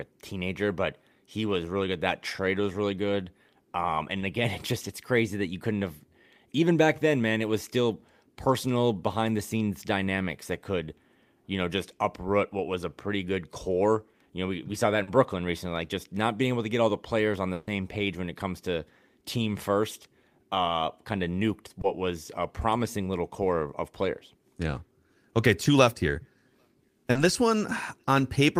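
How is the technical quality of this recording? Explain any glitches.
The recording is marred by brief dropouts typical of a network call, with four small glitches and one longer gap.

Short concealed packet loss occurs at 4.19–4.23 s, 15.03–15.09 s (just after "we we saw that"), 21.81–21.85 s (just before "was a promising little") and 27.11–27.17 s. Each is a quick smear where the voice briefly wobbles. Between 20 and 40 ms of audio failed to arrive in time, and the decoder patched the hole by extending the preceding sound before blending back into the real signal.

A burst of packet loss occurs at 17.53–17.69 s, between "the players on the" and "page when it comes". The last sound is held and fades away, and then speech resumes with a chunk missing. About 140 ms was lost in a row, too long to cover convincingly, so the receiver stretched the last sound and let it decay until real audio returned.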